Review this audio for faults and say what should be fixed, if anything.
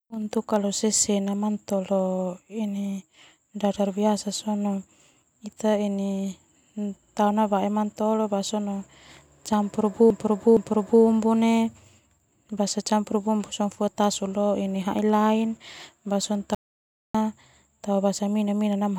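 Repeated frames from 10.10 to 11.03 s: a block of about 0.46 s of speech plays twice more, adding roughly 0.93 s. It fits a short run of compressed frames being written again. On a spectrogram the same pattern appears three times in a row. Write each frame exactly once, checking sequence numbers at the muxer or transport stage.

Audio dropout to silence from 16.55 to 17.15 s: about 0.6 s of speech vanishes into silence with no room tone, cutting off and resuming abruptly. The waveform drops to a flat line and the spectrogram goes blank. The likely cause is a lost input or brief mute while recording continued. Secure the input connection and monitor levels so a lost signal is caught immediately.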